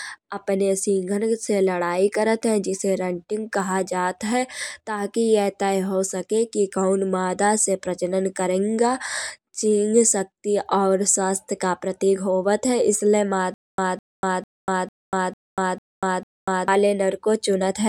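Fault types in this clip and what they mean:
Stutter with silent gaps: from 13.54 to 16.68 s the speech catches on a 207 ms fragment that repeats seven times, each followed by 242 ms of dead silence, an even 449 ms cycle. A stalled player or stream likely replayed its last buffer each retry, losing the audio that belonged there.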